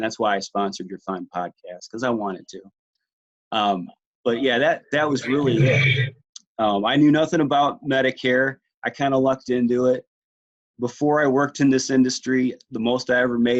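Nothing technically wrong turns up anywhere in this audio, so there's no problem here to pin to a time or a cause.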